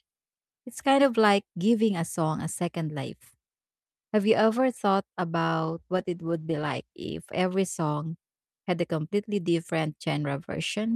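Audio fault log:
5.64–7.01 s, call bitrate drop: the speech turns rough and watery, with a dulled, muffled top end, for about 1.3 s before clarity returns. The call's bandwidth estimate collapsed, so the encoder was pushed from about 64 kbps down to roughly 15 kbps and forced to code coarsely, discarding high-frequency content. On a spectrogram the upper band is sharply truncated across this span, with smeared, blotchy harmonics; the waveform envelope looks largely unchanged.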